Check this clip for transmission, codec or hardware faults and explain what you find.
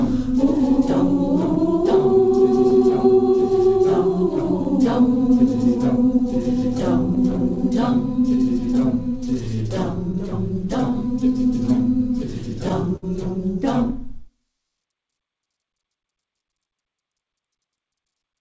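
Yes, there are several transmission faults, all timing-related, on top of a call path whose audio stops at 8 kHz, which fits a G.722 wideband codec.

Throughout the clip, pacing feels slightly uneven with small recurring hiccups. This is clock drift between sender and receiver: the sender's clock runs roughly 4 percent slow, so the receiver's buffer keeps draining.

From 0.34 s to 18.20 s, the tempo drags unsteadily, playing at about 96 percent speed. These are repeated timing corrections: the receiver keeps stretching short pieces, adding around 0.7 s overall to stay in step.

Between 2.70 and 4.67 s, and again between 6.19 and 7.58 s, there are roughly three brief ticks or smears each. These are scattered short gaps: a few packets arrived late or lost, and each hole of around 10 ms was patched by continuing the previous sound.

From 12.96 to 13.04 s, one sound is held too long with a slight buzz or dip. 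This is a short stall from a late packet: the jitter buffer ran empty, and the last sound was stretched 63 ms until the packet arrived.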